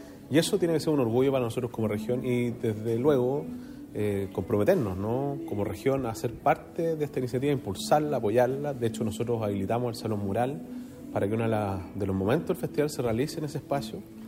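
There are no technical faults to describe in time order.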